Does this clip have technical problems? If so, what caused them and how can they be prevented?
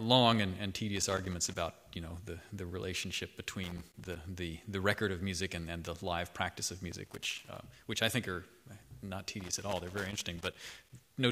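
Yes. Loose connector crackle breaks out four times, at 0.96–1.56 s, 3.64–4.16 s, 6.91–7.56 s and 9.40–10.93 s, heard as irregular scratchy bursts. A worn or dirty contact keeps making and breaking as it shifts, chopping the sound, and any DC on the line adds pops. The waveform shows ragged dropouts and sharp spikes, and the spectrogram shows scattered broadband vertical streaks. Cleaning or replacing the connectors and securing the cables so they cannot move would prevent it.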